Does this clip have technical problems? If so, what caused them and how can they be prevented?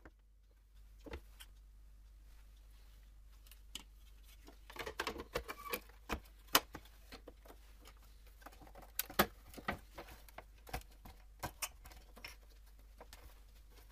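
Yes. At 0.75 s there is a sudden gain jump: the sound and its background noise rise together by about 6 dB and stay raised to the end. The likely cause is a gain setting applied at a single sample without any ramp. Smoothing gain changes over several milliseconds prevents this.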